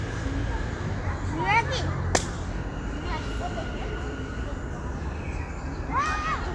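Nothing technical stands out in this recording of everyday sounds; there's no fault to point to anywhere in it.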